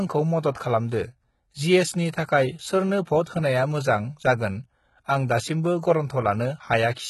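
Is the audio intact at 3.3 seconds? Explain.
No. From 3.24 to 3.26 s, a hiss runs about 28 ms ahead of an attack and softens it. This is pre-echo: the codec's quantisation noise is spread across the whole transform block, so it fills the quiet moment before the onset. The treble there also sounds gritty and synthetic, with nothing above 11.8 kHz. That is likely HE-AAC compression at a very low bitrate, around 16 kbps, with the upper band rebuilt from copied lower harmonics.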